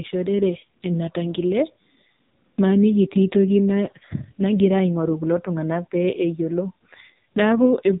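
From start to end the speech carries AMR narrowband mobile codec damage, and heavily so. Nothing survives above about 3.8 kHz, and the pulse-driven vocal-tract model leaves the voice buzzy and synthetic, which fits a low AMR-NB mode around 5.9 kbps.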